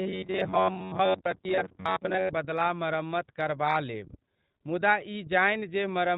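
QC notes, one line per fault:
throughout: iLBC codec, plainly audible. Each 20 ms frame is coded on its own and nothing above 4 kHz survives, leaving dull, slightly rough, synthetic speech that fits the 15.2 kbps mode. Unlike a buffer fault, this roughness never locks onto a fixed pitch.
0.01–2.29 s: robotic sound from repeated short buffers, ending just before "बदला मरम्मत करबा लेब". A rigid metallic buzz near 94 Hz rides over the speech. The likely cause is a block of roughly 11 ms being replayed while most of the new audio is skipped.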